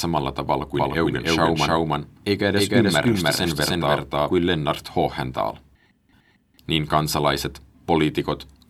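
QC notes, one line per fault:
0.75–4.33 s, doubled audio track: an equally loud full-band copy of the speech trails roughly 300 ms behind, likely from a second capture path. The waveform shows each syllable repeated, and the spectrogram a shifted duplicate that starts and stops abruptly with no decay.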